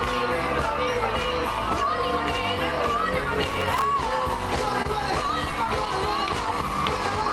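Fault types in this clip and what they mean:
processor overload crackle: From 3.50 to 3.84 s a gritty, tearing crackle rides on top of the sound. The processor repeatedly failed to deliver its small audio buffers on time, and each miss was covered by replaying a fragment of old audio with hard edges at both ends. The rapid spacing points to buffers of only a few milliseconds, with roughly twenty misses strung together. The crackle stops once the load eases.
short stall from a late packet: Between 4.82 and 4.87 s a sound hangs on slightly too long, with a slight buzz or dip. A packet arrived late, the jitter buffer ran dry, and the receiver stretched the last audio for 26 ms until the packet turned up. Playback then resumed exactly where it left off. No audio is lost, but everything afterwards plays 26 ms later than before.
scattered short gaps: Across 5.27 to 5.88 s about four brief hiccups are spread through the sound, each heard as a small tick or smear. 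Individual packets went missing or arrived late, and each hole was patched by continuing the preceding sound. The longest patch is around 10 ms and together they total roughly 40 ms, which is about 7% of the stretch. Nothing is actually dropped from the underlying audio.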